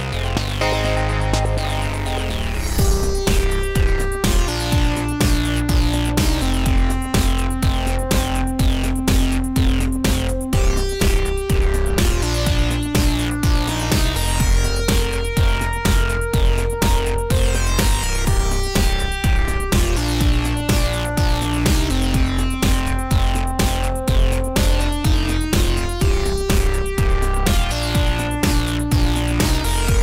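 Hard clipping runs through the whole 30 seconds. The audio is driven about 5 dB past full scale, so a few percent of samples get flattened, adding crackly harshness on peaks.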